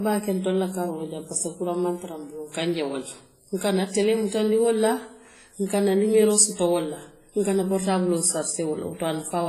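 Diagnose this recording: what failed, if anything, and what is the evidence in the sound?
The codec stage failed: the speech was likely squeezed through WMA compression at a low bitrate, and the damage is heavy across the whole recording. Its long transform blocks smear quantisation noise over tens of milliseconds, so consonants and onsets carry a ringing, washy halo, and a hiss rises and falls with the signal. Nothing survives above 15.3 kHz, and weak detail has been zeroed out, which fits a stream of roughly 24 kbps.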